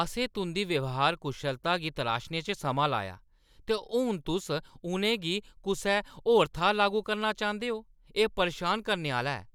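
A recording of speech, with no technical fault to point to. Nothing in it calls for a time or a cause.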